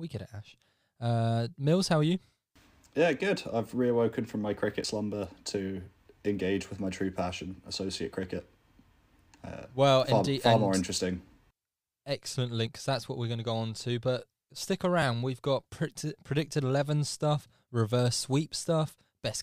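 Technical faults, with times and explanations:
4.84 s, 8.23 s, 12.67 s and 15.02 s, dropped buffer (overrun): the likely cause is the recording software falling behind, letting the hardware overwrite a block of samples before it was read, so each lost stretch is simply spliced out. No gap of silence appears. The speech jumps forward where the two edges meet. About 10 ms vanishes at 8.23 s and 15.02 s, about 20 ms at 4.84 s, and about 40 ms at 12.67 s, the longest skip.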